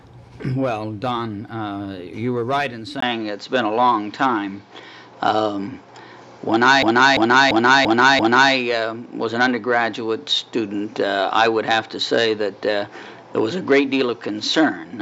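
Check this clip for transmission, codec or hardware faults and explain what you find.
Two faults are audible.

Input switched to a poorer device, from 3.00 s: the sound likely moved to a narrower-band microphone, going dull with nothing above 7.6 kHz, a 20 ms gap, a level change of about 5 dB and new background noise.

System hang loop, 6.83 to 8.53 s: a frozen system replayed one 341 ms buffer five times, a stutter at 2.93 Hz that fits a 16384-sample buffer.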